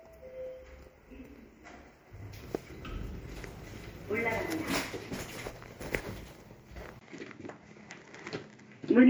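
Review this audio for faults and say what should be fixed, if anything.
MP3 compression affects the whole clip. The damage is plainly audible. The encoder drops weak frequency lines, and they flicker on and off between frames. That gives a watery, swirly texture, which fits a low bitrate near 64 kbps. Prevent it by exporting at a higher bitrate or in a lossless format.

The input switched to a poorer device at 6.99 s, and the new sound runs to the end. A gap of about 20 ms marks the switch. After it, nothing is heard above 7.6 kHz, so the sound turns duller. A faint new background noise appears, well below the sound. The level stays about the same. A change of recording device is the likely cause. Prevent it by locking the input device before recording.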